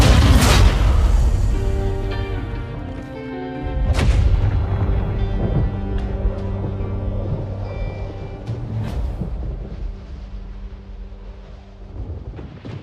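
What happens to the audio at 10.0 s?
Nothing goes wrong at 10.0 s; the audio runs on intact through that moment with no dropout, click or distortion.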